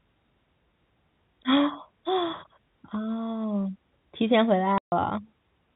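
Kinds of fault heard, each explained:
Packet loss filled with silence: a 140 ms gap of dead silence at 4.78 s, fitting seven 20 ms packets, with hard edges rather than concealment's smeared repeats.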